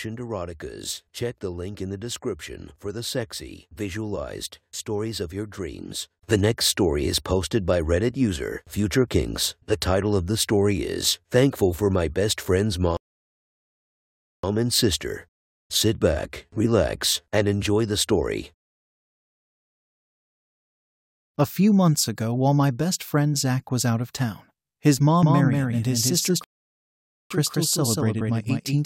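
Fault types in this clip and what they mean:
Rebuffering stall: The player runs dry of downloaded audio, goes silent, then picks up exactly where it left off, so nothing's missing, just time added. It happens twice here: from 12.97 to 14.44 s, adding about 1.47 s of dead air, and again from 26.44 to 27.31 s, adding about 0.87 s, which lands inside the doubled stretch near the end. Both times the sound cuts cleanly to silence and resumes exactly where it stopped.
Doubled audio track: Right after "out of town his", at 25.23 s, a second full-band copy of the speech snaps in and trails the original by roughly a fifth of a second, sitting a few dB lower. It has no reverb tail or room colour, just a dry duplicate, and it runs to the end. This is likely the same audio getting picked up a second time through a slower path, or an edit leaving two copies out of step.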